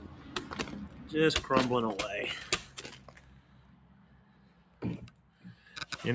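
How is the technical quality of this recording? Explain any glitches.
The technical quality is compromised by a speech-oriented noise suppressor acting on non-speech audio, with a dip in the middle of the clip.

Throughout: a noise suppressor applied to music or sounds treats sustained content as noise, so level swings by around 10 dB. Held portions pump and thin, while the waveform shows a fluttering envelope and sustained spectrogram bands that fade.

From 2.99 to 4.78 s: sound is cut by the noise suppressor, dropping about 4 dB for roughly a second and a half in total. Steady energy sinks and tails shorten. The waveform narrows, and the spectrogram shows dimmed, truncated decays.

The call microphone processing is audible in that nothing appears above 8 kHz on the spectrogram.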